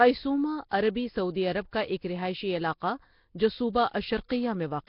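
Right from the start the speech carries a rough, hissy halo and a murky, underwater smear, with nothing above about 5.3 kHz. That's heavy damage, most likely from Nellymoser compression squeezing the audio into something like a 22 kbps stream and filling starved bands with noise.

Then at about 4.29 s there's a pre-echo: a brief hiss, spread over roughly 16 ms, creeps in just ahead of a sharp attack, which comes out softened. The coarse noise meant for the loud onset has leaked back into the quiet moment before it within the same block.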